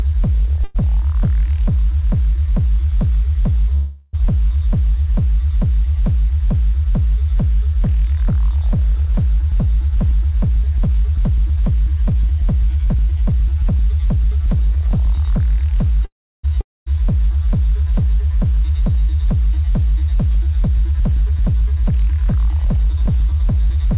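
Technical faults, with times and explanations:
0.64–0.77 s, 3.75–4.15 s and 16.05–16.53 s, call audio freeze: a gap of about 0.1 s, then two of about 0.4 s, is filled by the last sound stretched into a fading buzz. The last one fades to about 0.33 s of silence. Packets were likely held up until the jitter buffer ran dry, and the audio resumes where it stopped. A spectrogram shows smeared, repeating bands below 4 kHz, the limit of the G.711 call path.
16.61–16.88 s, long network dropout: about 0.26 s of audio likely never arrived. The receiver carries the previous sound briefly as a decaying hiss, then about 0.22 s of near-silence follows. The audio returns further on with that stretch gone.
9.42–15.18 s, jitter buffer speed-up: the receiver held excess audio and trimmed it by repeatedly cutting one or a few pitch periods, removing roughly half a second in total. Playback runs at about 108% speed with unchanged pitch, so it sounds hurried. 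On a spectrogram the events are compressed in time but the harmonic spacing stays the same.
20.68 s to the end, jitter buffer speed-up: the same trimming runs again at about 109% speed, removing roughly 0.3 s. The sound seems rushed at the same pitch. In the waveform the rhythmic spacing is tighter, with no visible gaps, because the small cuts fall on pitch-period boundaries.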